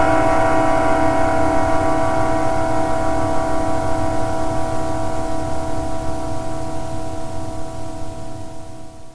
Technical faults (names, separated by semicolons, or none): aliasing